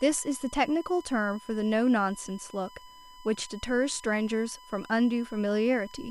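A speech recording carries a steady USB whine from start to finish. It is a fixed-pitch tone at 1 kHz, and that fundamental is its strongest part. It sits roughly 25 dB below the speech. The cause is the USB bus drawing current in 1 ms frames. Those regular pulses leak into the audio through a shared power or ground path.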